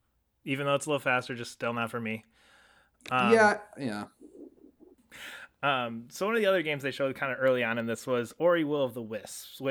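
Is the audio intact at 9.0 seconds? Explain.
No. At 9.0 s the speech carries a resampler restarted on every block, from 7.48 to 9.70 s, after "they showed kind of". Each 20 ms block is converted alone, leaving edge errors heard as a 50 Hz buzz.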